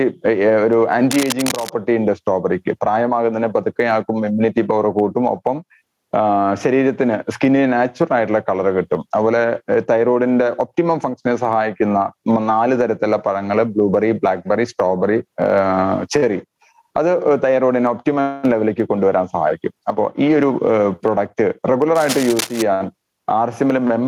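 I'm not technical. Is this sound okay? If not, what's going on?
No, there are two problems. The first runs through the whole clip: gain pumping. The recording level was most likely set far too high, so an automatic level control keeps slamming it down whenever something loud happens and then lets it climb back in the quiet moments. The level swings a lot, loud and soft parts end up closer together, and the whole thing sounds squashed and flattened.

The second shows up twice, from about 1.11 to 1.70 seconds and again from about 21.95 to 22.62 seconds: cable scratch noise. A worn cable, plug or knob was likely moved, and its electrical contact flickered rapidly. Each time, a burst of harsh scratching or rustling sits over the sound for about half a second or a little more, loud enough to compete with it.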